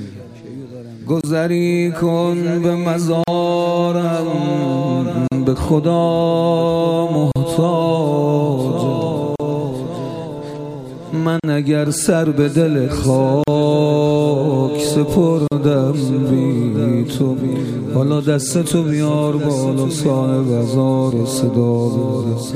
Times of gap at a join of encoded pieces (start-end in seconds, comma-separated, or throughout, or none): 1.21-1.24, 3.24-3.28, 5.28-5.32, 7.32-7.36, 9.36-9.40, 11.40-11.44, 13.44-13.48, 15.48-15.52